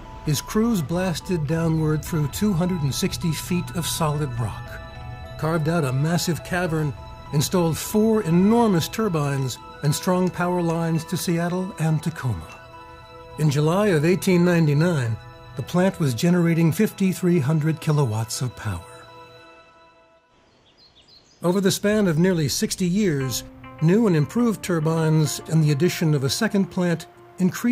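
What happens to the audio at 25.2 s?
Clock slip clicks run from 0.11 s to 27.72 s. A single sample slips about every 50 ms, likely from two unsynchronised clocks. The result is a soft rattle.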